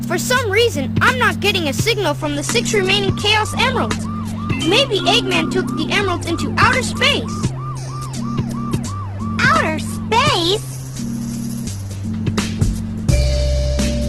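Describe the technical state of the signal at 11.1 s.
At 11.1 s the audio is in a lower-bitrate stretch of an adaptive stream, running from 2.20 s to the end. The quality drops suddenly, with no gap. Nothing sounds above 12.1 kHz, and artefacts rise. This suggests a fall from about 64 to 12 kbit/s.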